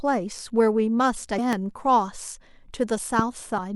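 At 1.35 to 1.39 s the speech is disrupted by damaged data in a compressed stream. Corrupted bytes make the decoder misread frames, lose sync and hunt for the next valid header. At 1.53 to 1.55 s and again at 3.19 to 3.21 s a single loud pop sits on top of the continuing speech, peaking at about 15 dB above it. It is likely a voltage step from a switch, plug or static discharge. The same damaged data returns at 3.54 to 3.59 s.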